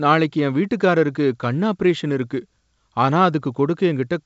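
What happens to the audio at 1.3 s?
Nothing goes wrong at 1.3 s: the speech there comes through intact, carried by G.722 wideband telephone coding that leaves no more than faint traces and keeps the band up to about 7.7 kHz.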